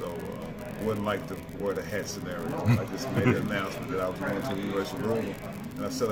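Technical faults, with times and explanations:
Throughout, unreliable data bit: one line carrying a single bit of each sample is marginal, so that bit comes through wrong in a random share of samples. Every wrong bit shifts the sample by the same fixed amount, producing a spike of identical size each time, scattered at random across the stream. Together these spikes form a steady crackle or fizz laid over the sound, and because the fault sits in the data path rather than the signal, it carries on unchanged through the pauses.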